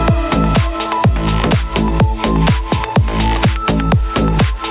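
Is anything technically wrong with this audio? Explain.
Yes. Gain pumping runs throughout. The gain swings by around 5 dB. The likely cause is a limiter fighting excessive microphone gain.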